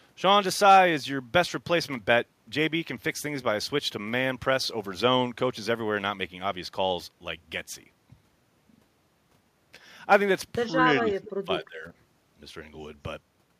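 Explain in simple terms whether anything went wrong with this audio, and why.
Speech suppressed in double talk, at 10.80 to 10.85 s and again from 11.02 to 11.91 s: the voice dips briefly, then sinks much deeper, likely because an echo canceller turned everything down while both sides talked.

Echo leak, from 10.88 to 11.01 s: a faint copy of the voice comes back about 0.2 s late, likely because a speakerphone's echo canceller let some of its own playback through.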